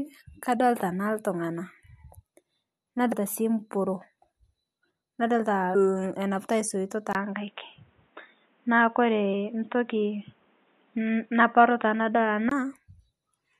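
Damaged data in a compressed stream shows up twice in this speech: first at 3.11 to 3.13 s, then again at 5.74 s. Each time a stretch of the encoded stream no longer matches what the decoder expects, so it misreads those frames, loses its place and has to hunt for the next valid frame header. The result is a brief, unnatural chirp or blip cutting through the audio, lasting only a couple of hundredths of a second.

From 7.13 s to 12.51 s the sound abruptly turns dull and boxy. Nothing above 3.8 kHz survives, a gap of about 20 ms marks the change, the level shifts by around 5 dB, and a fresh noise floor appears roughly 40 dB under the signal. This points to an input switched to a poorer device, likely a narrower-band microphone or headset call profile taking over, before the fuller sound returns at 12.51 s.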